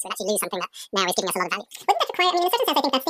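From the first moment to the last, the speech plays at twice its proper speed and a full octave higher, 12 semitones up. This is audio read two samples at a time (double speed). The reader treated each pair of samples as a single frame, as if the stream held two channels or wider samples. Only half as many frames came out, so everything runs fast and chipmunk-high.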